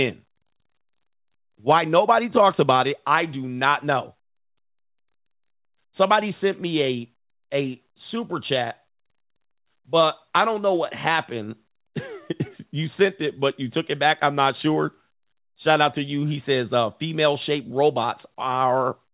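No technical faults can be heard in this speech recording. It went through a WebRTC call path, and nothing reaches above 4 kHz, which fits a narrowband telephone codec such as G.711 A-law.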